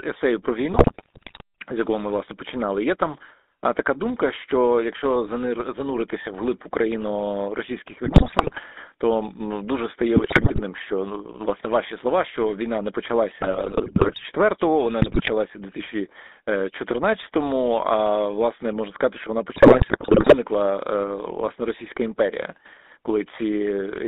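The whole clip runs through a GSM full-rate codec, which rebuilds speech from coarse pulse excitation within about 250 Hz to 3.7 kHz, leaving it buzzy and gravelly. GSM bit errors then corrupt decoder parameters at 0.72–1.41 s, 8.04–8.60 s, 10.16–10.61 s, 13.41–14.24 s, 15.02–15.31 s and 19.52–20.35 s, breaking the speech into squawks, pops and gargling.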